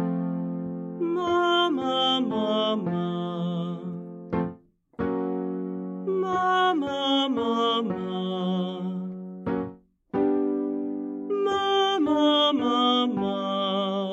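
No technical faults can be heard anywhere in the audio: the signal stays continuous and steady in level throughout.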